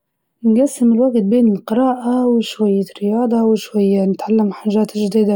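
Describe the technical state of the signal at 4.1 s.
At 4.1 s the speech shows channel delay (comb filtering), present across the whole clip. One channel lags by a few samples, well under a tenth of a millisecond, before the mono sum. Cancellation notches start around 7 kHz, leaving the top end dull and slightly hollow.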